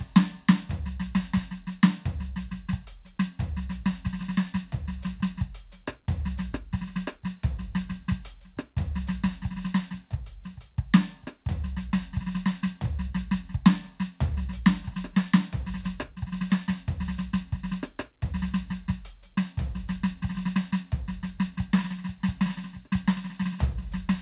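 No technical faults can be heard anywhere in the music. The call path is working as designed, with the G.711 A-law codec at 64 kbps leaving nothing above 4 kHz and the microphone processing trimming away the lowest bass.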